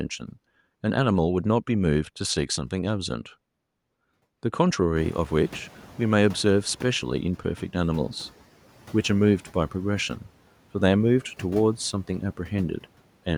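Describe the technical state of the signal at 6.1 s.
At 6.1 s the noise suppressor is catching up. The room noise jumps by about 23 dB around 5 s, and the suppressor's noise estimate lags behind it, so from 4.95 s to 7.4 s the new noise passes with less reduction, then sinks by about 7 dB over 2.45 s as the estimate adapts. On a spectrogram the noise floor brightens abruptly, then fades gradually; the waveform's baseline thickens, then slowly thins.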